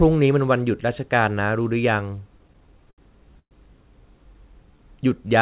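From 2.38 to 3.53 s there are repeated stalls, a stutter: packets kept arriving late, so the jitter buffer ran dry eleven times, each gap papered over by stretching the last sound, the longest about 117 ms. Nothing's lost, but it drags. Then from 4.33 to 4.78 s comes a jitter buffer slow-down: the buffer repeated pitch periods to build reserve, adding 44 ms, so the speech runs at 91% speed, same pitch, slightly drawn out. All of it sits on a band cut off at 4 kHz, which fits G.711 on a call path.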